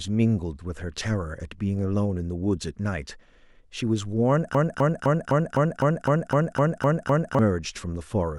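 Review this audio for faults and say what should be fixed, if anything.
From 4.55 to 7.39 s there's a broken-record loop: a 255 ms chunk repeats 11 times, most likely a stalled player or stream resending its last buffer. Add a stall watchdog that outputs silence instead of replaying stale buffers.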